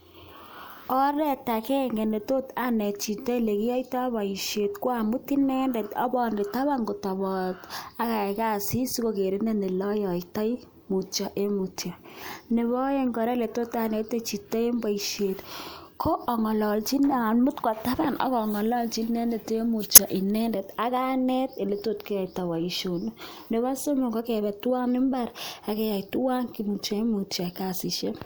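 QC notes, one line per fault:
19.94–19.99 s: corrupt frame decoded. A loud, short glitch, peaking around -5 dBFS, lasting about 54 ms. Bit errors in roughly a couple of compressed frames were decoded as-is, so misread gains and codes placed energy at wrong frequencies across those frames.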